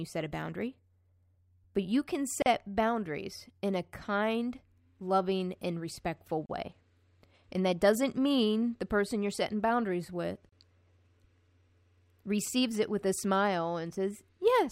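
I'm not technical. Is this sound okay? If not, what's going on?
No. The speech was encoded in separate pieces and joined without trimming the padding each piece carries, causing a gap at a join of encoded pieces. Brief gaps of about 30 to 40 milliseconds cut in every four seconds, at 2.42, 6.46 and 10.49 s, then the speech continues.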